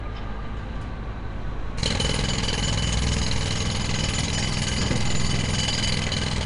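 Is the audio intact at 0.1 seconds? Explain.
No. At 0.1 s, as throughout, the sound carries rough, hissy, smeared damage, likely Nellymoser compression, whose fixed-rate blocks noise-fill weak bands; a spectrogram shows speckled noise patches and nothing above 10.7 kHz.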